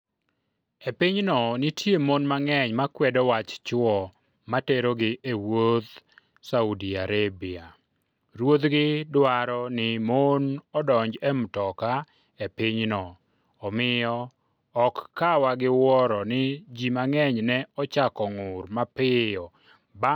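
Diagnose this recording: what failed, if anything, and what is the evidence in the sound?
Nothing seems to have gone wrong anywhere along the chain, as far as the ear can tell; the speech runs along without any moment that betrays a problem in any stage.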